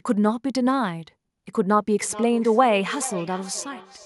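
From 2.02 s onward, speech repeats roughly every 0.4 s, about 15 dB down: feedback echo between two devices, one's loudspeaker reaching the other's microphone.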